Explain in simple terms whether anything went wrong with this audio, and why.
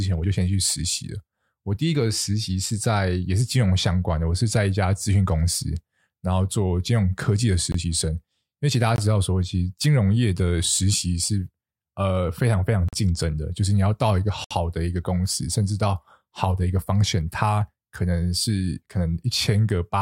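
Something did go wrong: the speech drops out four times in blocks of digital silence. The sound stops dead and restarts with no fade. The gaps fall at 7.72 s and 8.96 s (about 21 ms each), 12.89 s (about 43 ms) and 14.44 s (about 64 ms). The lengths step up as one, two and three equal chunks, which points to audio buffers not being filled in time.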